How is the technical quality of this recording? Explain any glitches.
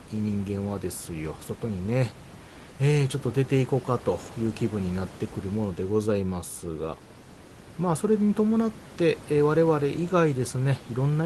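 No glitches or faults are audible here.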